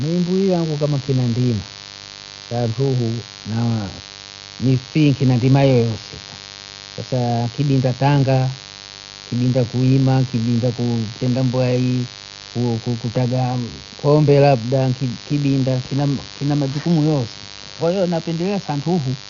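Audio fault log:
throughout, mains buzz: a steady, raspy 50 Hz buzz runs under the speech, roughly 20 dB below it. Sharp switching spikes twice per mains cycle spread harmonics into the kilohertz range, which makes it gritty and edged rather than the smooth, pure tone of plain hum.
throughout, Dolby Digital compression: the speech sounds dull, with nothing above 6.9 kHz and a rough, fluttering noise around voiced tones. This is likely AC-3 coding at a low bitrate near 48 kbps, where starved frequency lines are refilled with dither noise, unlike a clean low-pass filter.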